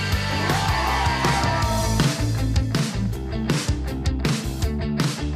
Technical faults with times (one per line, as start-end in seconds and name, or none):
none